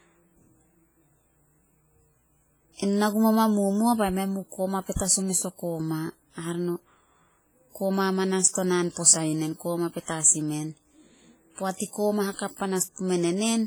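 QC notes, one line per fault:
Throughout, WMA compression: the speech rings and sounds washy, with a hiss that swells and fades with the signal and weak detail dropped out. This is likely heavy damage from a Windows Media Audio transform coder at a low bitrate, around 24 kbps. Nothing is heard above 21 kHz.
8.92 to 8.97 s and 12.37 to 12.39 s, pre-echo: a short hiss comes just before "posa yu", spreading over 46 ms, and again just after "i koma", over 22 ms. The sharp onsets sound softened because noise sized for each loud attack also fills the quiet moment before it.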